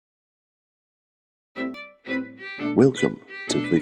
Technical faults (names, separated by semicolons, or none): compressed frames skipped